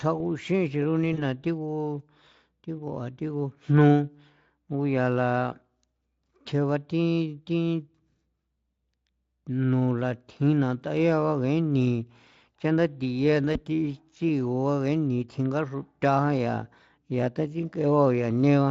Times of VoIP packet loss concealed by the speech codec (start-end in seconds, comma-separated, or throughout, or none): 1.13-1.23, 13.53-13.60